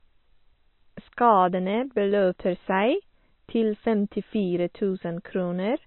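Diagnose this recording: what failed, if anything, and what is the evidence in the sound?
The codec stage failed: the speech has nothing above 4.1 kHz from start to finish, with smeared, watery detail. This is likely low-bitrate audio saved at a high bitrate, since the damage fits a first MP3 pass near 26 kbit/s that a later high-rate MP3 encoding preserved but could not restore.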